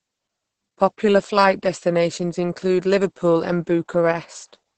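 Opus voice compression runs through the whole speech clip. Nothing is heard above about 8.8 kHz, so the top of the band is gone. The codec is in its SILK linear-prediction mode, and the damage is heavy. That fits a bitrate near 10 kbps. At that rate the excitation is coded very coarsely. The speech sounds muffled and hoarse. There is a slight robotic edge throughout.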